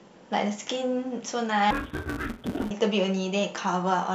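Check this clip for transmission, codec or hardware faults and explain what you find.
One fault stands out in this speech clip: a stretch of interleaved audio read as planar, from 1.71 to 2.71 s. Each short block of alternating left and right samples gets split into halves, with each half played as one channel at half speed. The blocks last 5.8 ms, which fits a 256-sample block, so the speech turns dull and robotic with a buzz at 172 Hz and no clear octave drop. On a spectrogram, harmonics at 172 Hz multiples band across that second, and the waveform shows a regular 5.8 ms chop.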